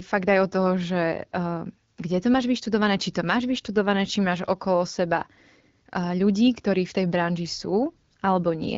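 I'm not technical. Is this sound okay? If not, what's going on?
Yes, this speech sounds fine and nothing in it is going wrong. It has been through the AMR wideband (HD Voice) codec used for phone calls, so it has the slightly narrowed, phone-call quality of an HD Voice call, but it stays clear and easy to follow.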